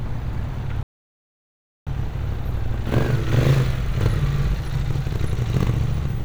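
At 0.83 s the player likely ran out of data, a playback stall, so the sound cuts to silence for about 1.04 s before resuming at 1.87 s.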